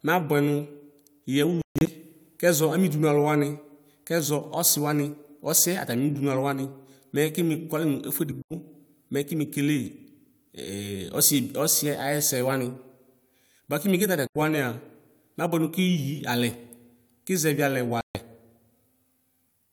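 Packets likely arriving too late for the headphones cause a Bluetooth dropout: speech cuts abruptly to silence at 1.62–1.92 s (broken gaps), 8.42 s, 14.27 s and 18.01 s, then resumes further on.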